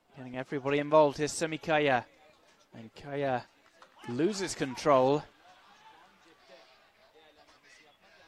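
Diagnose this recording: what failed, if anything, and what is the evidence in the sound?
No fault found.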